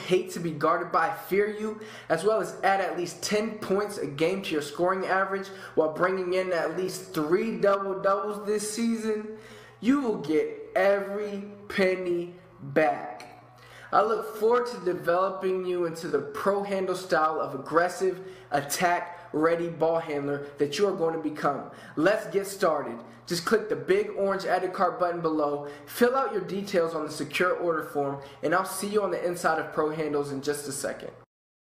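A time-stretched section from 6.35 to 16.41 s slows to 0.71 times speed at unchanged pitch, likely from repeating short pieces, leaving it dragging.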